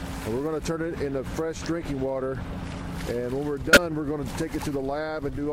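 At 3.73 to 3.77 s there's a corrupt frame decoded: a compressed frame with flipped bits got played anyway, so misread codes spread energy into the wrong frequencies. It comes out as a short chirp, squeak, blip or burst of noise, about one frame long, peaking near -10 dBFS.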